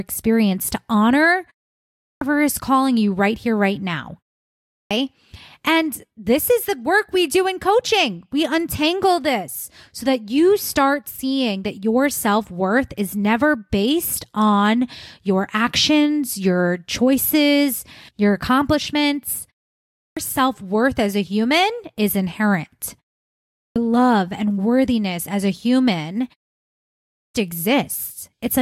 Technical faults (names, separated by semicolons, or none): clipped start after a pause